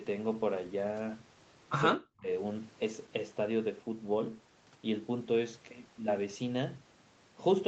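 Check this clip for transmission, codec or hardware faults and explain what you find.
One fault turns up, a short dropout in the speech from 1.97 to 2.28 s that points to speech suppressed in double talk. The likely cause is an echo canceller that could not tell the near talker apart from loudspeaker echo while both sides were active, and so clamped down on everything it heard. The speech sinks by roughly 40 dB for about a third of a second, almost vanishing before recovering. Apart from that stretch, the audio stops at 8 kHz, as expected for an Opus call path at that bandwidth.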